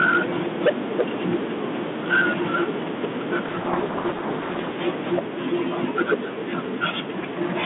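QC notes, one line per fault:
0.0–0.7 s, 0.99–1.35 s, 2.12–2.64 s, 4.87–5.19 s and 5.83–6.15 s, microphone overload: the loudest moments break into a harsh, crackling edge. It is worst at the very start and in the second burst, where peaks overshoot by about 16 and 14 dB. The later bursts overshoot by about 7, 5 and 8 dB. The likely cause is input gain set too high, so peak tops are flattened at the converter's ceiling, with a sizeable share of samples clipped early on.
3.46–4.75 s, codec payload misread: for just over a second the sound is buried in heavy, rasping distortion, far rougher than the light grain of the narrow 150 Hz to 3.5 kHz telephone band around it. The decoder is taking in G.726 code words with their bit order reversed. Each reversed word decodes to the wrong difference value, so the speech stays buried in distortion until the packing matches again at 4.75 s.
5.19 s, microphone volume stepped down: right as the overload burst ending at 5.19 s finishes, the whole level drops by about 3 dB in one abrupt step, taking the background down with it. 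This likely comes from the call software detecting clipping and cutting the device's input gain at once rather than easing it down. The clipping returns at 5.83 s, now about 8 dB over.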